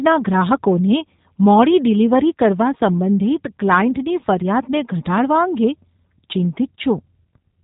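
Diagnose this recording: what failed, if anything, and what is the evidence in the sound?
The failure is at the codec stage, and it's G.729 coding running the whole way through. Nothing above about 3.8 kHz survives, so the speech sounds boxed-in and thin, with a plainly audible rough, slightly synthetic edge. That's what you get when each 10 ms frame is rebuilt from a vocal tract filter, a pitch guess and a handful of pulses instead of the real waveform, which fits an 8 kbit/s G.729A stream.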